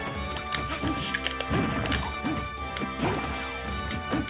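No technical faults can be heard in this audio.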